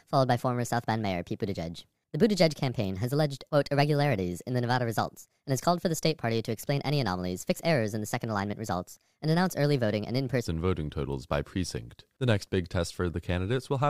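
From the start to 10.45 s the speech runs at the wrong speed, about 1.32 times too fast. Because speed and pitch move together, voices sound hurried and raised by roughly five semitones, which is likely from playback on a mismatched clock. At 10.45 s the normal pace and pitch return abruptly. On a spectrogram, harmonics and formants sit visibly higher before that point and drop down after it, while the waveform's syllable envelopes are compressed in time.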